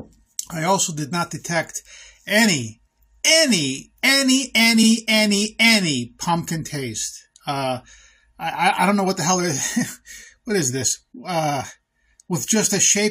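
Repeated frames occur at 4.82 to 4.87 s. A block of compressed frames reached the decoder twice, so the same 46.4 ms of sound plays once more immediately after itself. This is heard as a brief stutter, a tiny hiccup in which the sound seems to skip back and restate itself. The repeated span fits about two compressed frames, and the duplicate makes the audio 46.4 ms longer than it should be.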